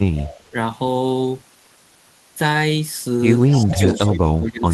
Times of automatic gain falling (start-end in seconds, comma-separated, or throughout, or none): none